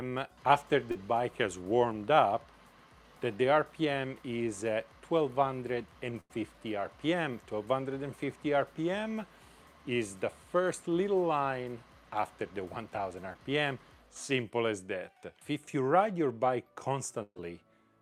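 At 0.91 to 0.97 s and again at 13.33 to 13.37 s there is short concealed packet loss. About 40 ms and then 20 ms of audio never arrived, and the receiver extended the preceding sound to cover the hole. Each is a brief smear or wobble.

The bursts of packet loss at 6.21 to 6.31 s and 17.23 to 17.38 s are longer, about 80 ms and 140 ms missing. In each, the sound is stretched into a held, fading tone or hiss, and in the second it fades to silence for about 30 ms. The audio then restarts further on, so material is skipped.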